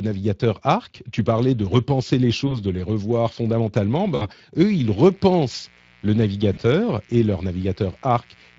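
Speech, coded throughout with the Speex codec. It has plainly audible codec damage at about 20.6 kbps. Packet loss concealed by the speech codec occurs at 2.47 to 2.58 s, 4.15 to 4.29 s and 6.53 to 6.60 s. Each dropout is stretched out and fades. From 4.73 s to the end there is a steady, raspy 60 Hz mains buzz, roughly 30 dB below the speech. It comes from switching spikes leaking in twice per mains cycle.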